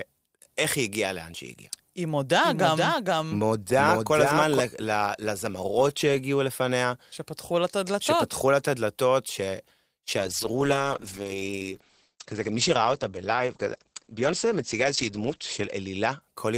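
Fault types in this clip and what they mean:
Doubled audio track: From about 2.44 to 4.60 s the speech is heard twice, with a second full-band copy trailing by about half a second and sitting a few dB lower. It has no room tail and cuts in and out abruptly, likely from a second capture path.
Call bitrate drop: From about 10.18 s the encoder's budget falls from 32 to 9 kbps, and the top end shrinks from 20 kHz to 8 kHz. The speech goes muffled, bottoming out for roughly 5.5 s.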